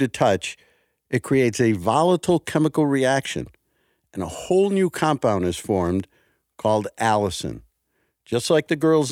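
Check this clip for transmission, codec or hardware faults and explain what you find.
Nothing stood out on listening to the speech in this recording.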